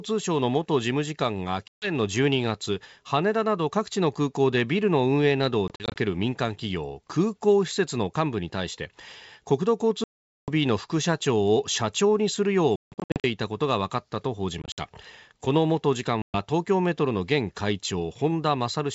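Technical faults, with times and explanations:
1.68–1.92 s, 5.68–5.98 s, 10.04–10.51 s, 12.76–13.24 s, 14.62–14.85 s and 16.22–16.36 s: packet loss on an ADPCM call. Dropped packets, fitting roughly 20 ms each, leave hard-edged silent holes, scattered around 5.7, 12.8 and 14.6 s. After each hole the decoder's predictor and step size no longer match the sender's, so speech resumes slightly distorted, settling within tens of milliseconds.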